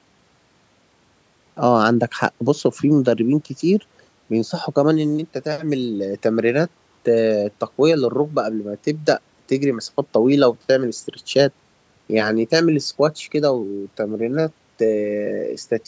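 No faults are audible in the speech; the call microphone processing is working normally, trimming the lowest bass and leaving nothing above 8 kHz.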